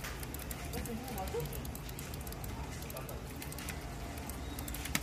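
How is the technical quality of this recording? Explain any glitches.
The recording has plainly audible coding damage from start to finish. Throughout, the likely cause is low-delay AAC compression of the AAC-ELD kind, at a rate that fits about 32 kbps. Its short frames resolve fine frequency detail poorly, so the sound turns rough and grainy, and nothing remains above 15.6 kHz.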